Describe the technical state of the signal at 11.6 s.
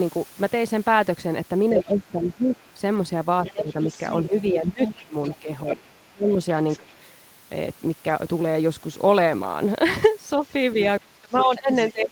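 At 11.6 s the talker's speech is being suppressed in double talk, from 10.38 s to the end at 12.11 s. The level dips in pieces by as much as around 30 dB, likely because the echo canceller turned everything down while both sides spoke at once. Unlike a dropout, the gaps follow the other side's activity rather than falling at random.

Over the same moment, from 11.37 to 11.91 s, the other side's voice is leaking through, sitting roughly 10 dB below the talker. It is likely loudspeaker echo the canceller failed to remove. It is a separate, second voice, not a reverberant smear of the talker's own speech.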